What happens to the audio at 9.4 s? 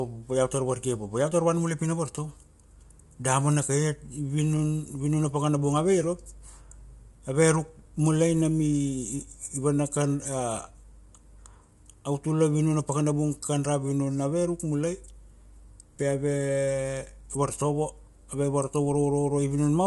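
At 9.4 s the speech sounds rough and grainy, with a hazy noise filling the gaps between the voice's harmonics and no content above about 11.6 kHz. This is present for the whole clip, not just that moment. The likely cause is low-delay AAC compression (AAC-ELD): its short frames resolve pitch harmonics poorly and spend bits quickly, so at a rate that sounds near 32 kbps the damage becomes plainly audible.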